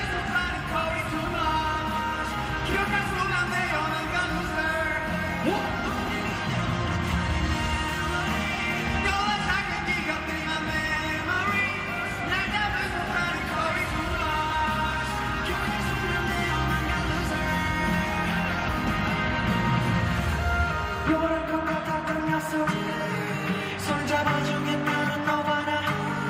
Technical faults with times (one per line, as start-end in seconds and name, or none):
none